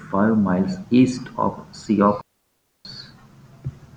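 A digital wireless dropout interrupts this speech clip: the receiver lost too much data and muted the link from 2.21 to 2.85 s, about 640 ms. The result is a clean hole of near silence, faded in and out very quickly, with no noise burst on either side.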